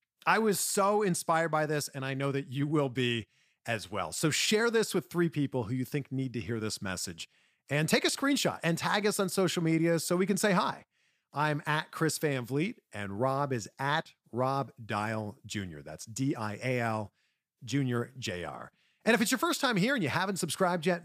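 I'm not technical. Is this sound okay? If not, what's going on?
Yes, this sound is okay; nothing in it is going wrong.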